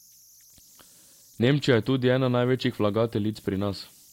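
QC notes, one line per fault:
Throughout, converter idle tones: undithered delta-sigma conversion locks into repeating bit patterns at low levels, leaving a faint whistle near 7 kHz, about 33 dB below the speech.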